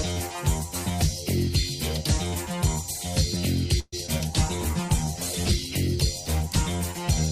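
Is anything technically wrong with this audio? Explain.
Yes, there are three kinds of fault, all clustered in the second half.

From 3.79 to 3.95 s there is a call audio freeze. The last sound is stretched into a fading buzz for about 130 ms, including about 30 ms of near-silence. This is likely because delayed packets drained the jitter buffer. Unlike packet loss, nothing is cut out: the audio resumes where it stopped, only later.

At 4.07 and 4.18 s come two short concealed packet losses, each about 30 ms. Here about 20 ms of real audio never arrived and was papered over by extrapolating the preceding sound. The result is a brief smear or wobble where material is genuinely missing, rather than a pause.

From 4.32 s to the end there is a call bitrate drop, from 128 to 16 kbps, holding at its lowest for about 1.3 s. The encoder, starved of bits, codes coarsely and trims the highs. The sound turns watery and muffled, a sustained change in tone rather than a momentary glitch.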